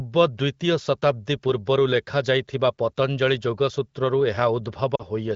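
A short speech recording, carried over AMR wideband (HD Voice) at a rate that keeps the voice clear, has lost AMR speech frames from 4.96 to 5.02 s. For about 40 ms, which fits two 20 ms frames, the decoder repeats the last good pitch and vocal-tract settings with falling gain. The sound drops to near silence within those two frames and returns weak or rough for a moment. On a spectrogram the harmonics freeze into a stretched, fading band, and the waveform envelope sags across that gap.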